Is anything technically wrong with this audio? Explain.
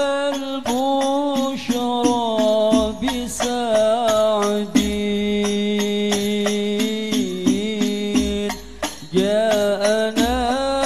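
No, nothing technically wrong can be heard here.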